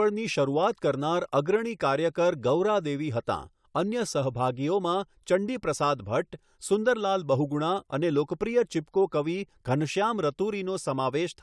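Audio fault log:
No fault can be heard anywhere in this speech recording. There is nothing here to log.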